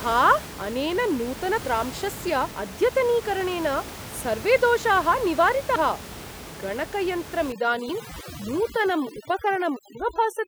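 Speech here, and you get a run of sudden jumps with the sound skipping ahead at 0.46, 1.58, 2.51, 5.76 and 7.90 s. The first two skip roughly a third of a second each, the third about 0.2 s, and the last two about a tenth. That's likely dropped buffers from an overrun, where the audio got overwritten before it was read out and the edges were butted together. From 7.52 s to the end there's overdone noise removal. The room noise, which sits about 14 dB under the voice, drops and breaks up into twinkly specks, and the speech loses its quieter parts, which get gated away too.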